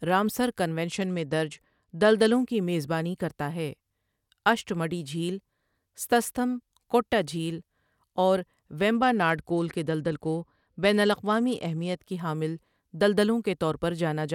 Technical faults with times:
0.88-2.47 Bluetooth SBC bit pool drop
8.93-11.97 Bluetooth SBC bit pool drop

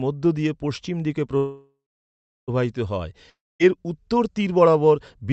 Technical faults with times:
1.37-2.50 call audio freeze
3.30-3.61 long network dropout

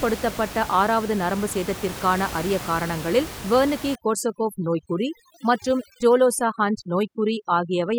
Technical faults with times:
3.95-7.99 overdone noise removal

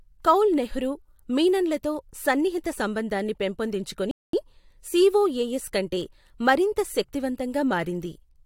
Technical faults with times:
4.11-4.33 playback stall

